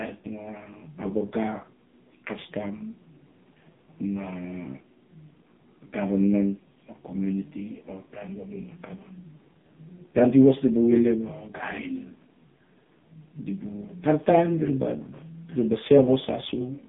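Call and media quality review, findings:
AMR narrowband mobile codec, present throughout. Speech band-limited to roughly 150 Hz to 3.6 kHz. Nothing above 3.7 kHz. Heavy codec damage. Voice buzzy, synthetic, thin. Component: AMR-NB encoder on the mobile leg. Mechanism: 8 kHz sampling, so no high band survives. Vocal-tract model driven by sparse pulses per 5 ms subframe. Coarse excitation sounds like a low mode, around 5 kbps.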